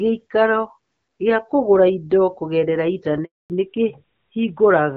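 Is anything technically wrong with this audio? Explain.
Yes, there are two faults in this speech clip. From 3.24 to 3.50 s there is a handover gap: the call switched networks and no speech frames arrived for 260 ms, so the speech cuts out quickly and stays silent. From 3.50 s to the end comes a fallback to narrowband. The wideband HD Voice link, whose light coloration fits AMR-WB at around 12.65 kbit/s, gives way to a narrowband codec, removing everything above 4 kHz and leaving the speech duller and rougher.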